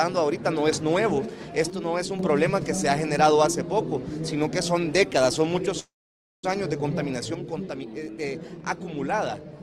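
The audio drops abruptly by about 6 dB from 1.70 to 2.19 s and again from 7.34 s to the end. The likely cause is that one channel drops out of a stereo source before it is summed to mono. At 5.79 s the sound hangs as a fading fill that goes silent for 540 ms, then resumes at 6.45 s with nothing lost but a 0.64 s delay inserted. This call audio freeze likely comes from late packets emptying the jitter buffer.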